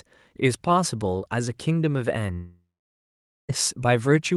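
At 2.33 s the sound breaks off. A fading buzz briefly continues the last sound. Then 0.86 s of near silence follows. Audio resumes at 3.51 s, with 1.16 s lost for good. A long network dropout is the likely cause.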